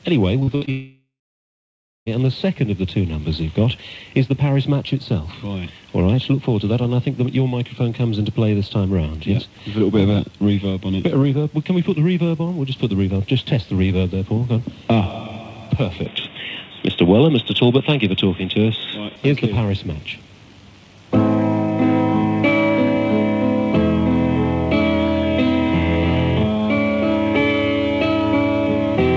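From 0.40 to 0.69 s the audio breaks up with repeated packet loss, giving a robotic sound. Four short holes open within that 0.29 s, the longest about 61 ms. Each is patched by stretching the last bit of sound, so close to half the span is concealment, and the result comes out choppy. A spectrogram shows smeared, frozen harmonic bands alternating with brief real fragments, and the waveform shows repetitive, oddly regular cycles.

Straight after, from 0.71 to 2.10 s, comes a long network dropout, the likely cause of a gap of about 1.36 s. The last sound continues briefly as a fading buzz or hiss, then roughly 0.96 s of near silence follows before the audio resumes further on, with the intervening material simply gone. On a waveform this is a short decaying tail collapsing to a flat line. The spectrogram shows a dark vertical band with an abrupt restart at its right edge.

From 16.06 to 19.16 s the input likely switches to a poorer device. 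The sound turns dull and boxy with no gap at the change. The band that reaches 8 kHz through the G.722 call path suddenly stops at 3.8 kHz, a visible ceiling across the spectrogram that lifts again when the stretch ends. The background noise floor changes, sitting roughly 35 dB under the signal, and the waveform envelope shifts by a few decibels at each boundary.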